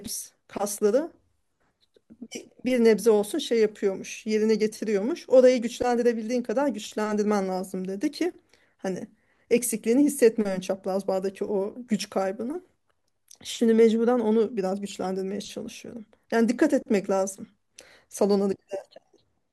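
No technical faults can be heard anywhere in this speech recording. Nothing in the audio calls for a time marker or a repair.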